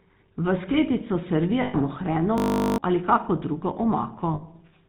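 Throughout, the speech carries the buzzy, gravelly texture of the GSM full-rate codec, and the damage is plainly audible. The codec keeps a vocal-tract model and replaces the excitation with a sparse, regularly spaced pulse train, so the fine detail of the voice becomes rough. Nothing reaches above 4 kHz, which fits the 13 kbps full-rate mode and leaves sibilants dull and thin.

From 1.62 to 1.76 s there are lost GSM frames. About 120 ms of coded data is missing, which fits six consecutive 20 ms frames. The decoder fills the gap by reusing the last good frame's parameters. The result is a short metallic ring where the speech should move on, before normal decoding resumes.

From 2.38 to 2.78 s a system hang loop takes over. The software stalled while the audio hardware kept replaying the same 20 ms of its ring buffer, about twenty times. At a 50 Hz repeat rate this sounds like a steady low buzz rather than a stutter. 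About 0.4 s of real audio is replaced by the loop.

From 4.34 to 4.43 s there is a second, shorter run of lost GSM frames, about 80 ms, which fits four frames. The same concealment holds and rings the last good frame until valid frames return.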